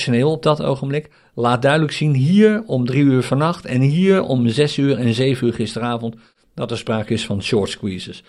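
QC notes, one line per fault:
Nothing to flag on this speech clip; no technical faults turned up anywhere in it.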